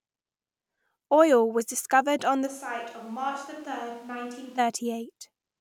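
At 2.48 s, right after "was discovered on the", the sound abruptly turns roomy and hollow. The bass thins out and the level falls by roughly 10 dB. Background noise rises to around 25 dB below the speech. This is a switch to a distant microphone, likely because the close microphone's feed dropped out and a farther one, such as a camera's, took over. At 4.57 s the close, full sound snaps back just as suddenly.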